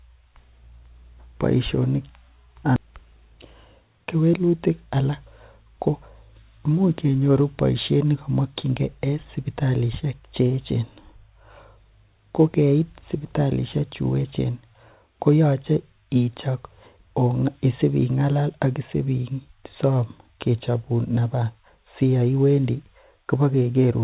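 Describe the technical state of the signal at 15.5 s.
At 15.5 s the speech is intact, with no dropout, glitch or other fault, only the narrow telephone-style band of the call path, with nothing heard above 4 kHz.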